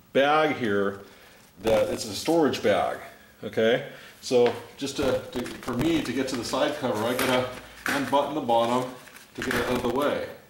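Processor overload crackle occurs from 1.00 to 2.04 s, 5.00 to 6.02 s and 9.27 to 9.96 s. Dozens of very short buffers, each around 1.5 ms, miss their deadline and repeat old audio with hard edges, giving gritty crackle over the sound.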